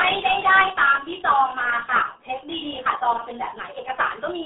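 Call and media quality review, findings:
RealAudio 14.4 codec, throughout the speech. Heavy codec damage: muffled, gargly tone. Band limited to roughly 250 Hz to 3.6 kHz, nothing above 3.8 kHz. Low-rate speech coding for dial-up, consistent with about 8 kbit/s, discards high band and fine spectral detail.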